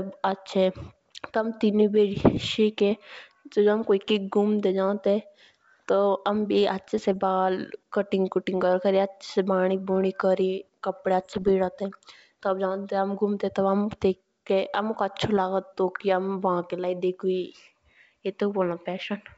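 Bit errors on an ADPCM link hit at 2.20–2.38 s, just after "हमें तेनुई", then at 6.98–7.16 s and 11.20–11.51 s. Flipped bits derail the G.722 decoder's step size and predictor, so each burst rings on as rough pops and brief level jumps, showing as jagged waveform spikes and broadband vertical smears on a spectrogram.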